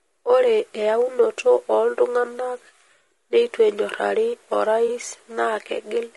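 The clip is speech with plainly audible codec damage throughout. The voice sounds rough and grainy. Noise fills the gaps between the harmonics, and the top band sounds thin and synthetic. This is likely low-delay AAC compression of the AAC-ELD kind used for video calls. Its short frames resolve pitch harmonics poorly, so bits run short. The damage fits a bitrate around 32 kbps. There is also AAC frame loss with concealment from 4.87 to 4.90 s. A brief smeared, noisy patch replaces the sound there. The decoder rebuilt the gap from the last good spectrum instead of leaving silence. The length of the patch points to a single lost frame of about 20 ms. It is too short to fade toward silence.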